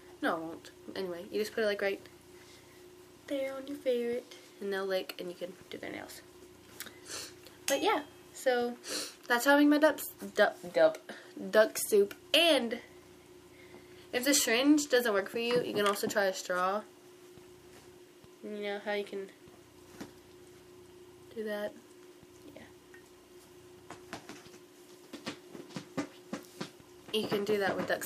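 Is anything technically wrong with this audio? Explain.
No, nothing technically wrong can be heard here.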